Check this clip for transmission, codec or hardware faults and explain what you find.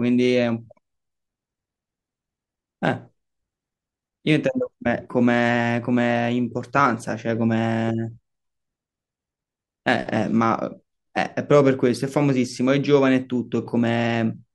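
No faults turn up anywhere in the speech recording, and the signal stays intact and continuous throughout.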